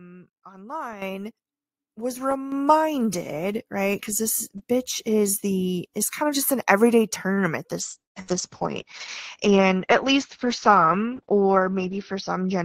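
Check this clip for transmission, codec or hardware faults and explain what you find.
Yes, there are five kinds of fault in this speech clip. They are two level steps, a short stall, a bitrate drop, lost audio and a speed-up.

Microphone volume stepped up at 1.02 s and 2.52 s. The call software judged the input too quiet and raised the device gain in single jumps, by about 10 dB, then about 7 dB. The voice and the background get louder together at those instants.

A short stall from a late packet occurs from 7.33 to 7.49 s, right after "of just an everyday". A packet arrived late and the jitter buffer ran dry. The last sound was stretched by 41 ms, with nothing lost. It comes across as a briefly held, slightly buzzy sound.

A call bitrate drop starts at 7.85 s and lasts to the end. The bandwidth estimate fell, so the encoder went from 48 to 9 kbps. Audio bandwidth narrowed from 20 kHz to 6 kHz. 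The voice turns muffled and rough, with a watery texture.

Bursts of packet loss fall between 8.04 and 8.33 s. The main burst loses about 120 ms, and a second loss of 60 ms falls inside it, from 8.22 to 8.31 s. The receiver continued the last sound, faded it, then went silent for about 110 ms. Speech resumes further on with a piece missing.

A jitter buffer speed-up runs from 11.88 to 12.51 s. Too much audio had built up in the buffer, so short pitch-period pieces were cut, around 50 ms in total. Speech plays about 7% fast at the same pitch and sounds slightly hurried.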